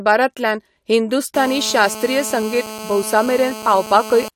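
A hard, raspy buzz at about 217 Hz, rich in harmonics, runs steadily under the speech from 1.36 s to 4.29 s at about 13 dB below it. This is GSM phone buzz: a nearby 2G phone in a call transmits bursts that the audio circuitry rectifies.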